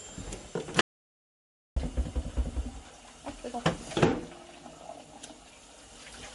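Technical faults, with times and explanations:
Throughout, MP3 compression: the audio sounds watery and swirly with nothing above about 11.1 kHz, likely from a low bitrate, around 48 kbps, starving the encoder.
0.81 to 1.76 s, audio dropout to silence: the sound cuts to complete silence for about 0.95 s with no room tone, likely from the input being briefly lost.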